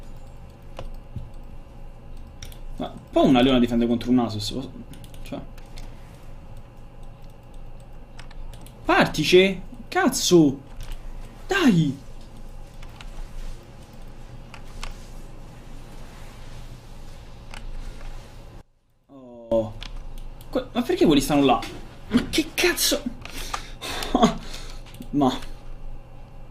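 From 18.61 to 19.52 s the sound collapses by about 23 dB, likely one channel inverted in polarity so the shared centre cancels in mono. Unlike a dropout, it never goes fully silent: a faint residue of the small mismatch between the channels remains.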